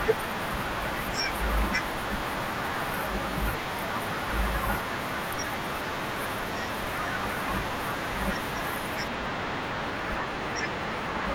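From 9.08 s to the end, the speech takes on a channel delay (comb filtering): one side lags by roughly two samples, a few hundredths of a millisecond, so summing to mono cancels energy near 10 kHz, dulling the top. A spectrogram shows a steady dark notch band there.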